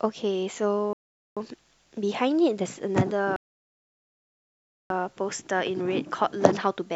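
At 0.93 s the speech drops into silence and comes back at 1.37 s, about 0.44 s later, picking up right where it left off. That's a rebuffering stall: the player ran dry of downloaded audio and simply waited for more. It happens again, longer, from 3.36 s to 4.90 s, a gap of about 1.54 s. Nothing goes missing either time; the pauses just stretch the timeline.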